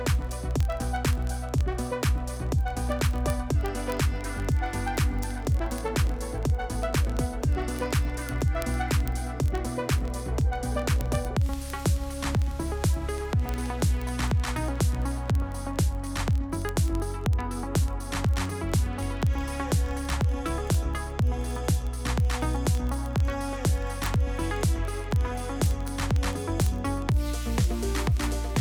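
A receiving device is running on its own clock instead of locking to the sender's over the digital link, a fault known as word clock ticks. The two clocks differ by roughly a thousand parts per million, so they slip past each other about every 20 ms, and at each slip one sample is dropped or repeated. That produces a fast, steady train of ticks, around fifty a second and roughly a thousand in all, running from 0.10 s through to 28.60 s.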